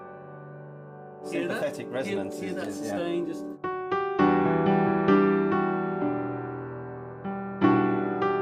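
No technical faults are audible.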